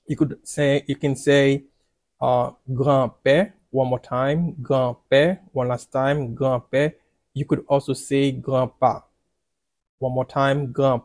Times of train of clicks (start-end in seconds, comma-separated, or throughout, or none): none